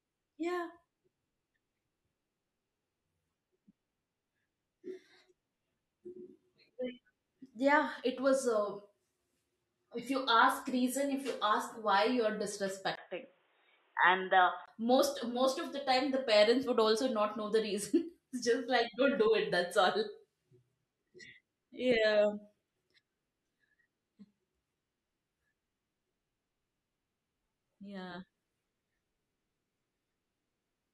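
Speech, where the recording's input likely switched to a poorer device, such as a headset in call mode, from 12.95 s to 14.68 s. At the switch a brief gap of about 20 ms drops out, then the band narrows to nothing above 3.8 kHz, so the voice turns dull and boxy at the same loudness, with a faint new noise floor well beneath it, before full clarity returns at 14.68 s.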